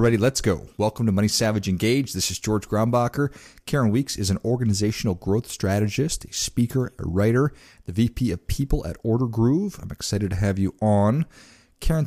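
No technical faults are audible anywhere in the speech.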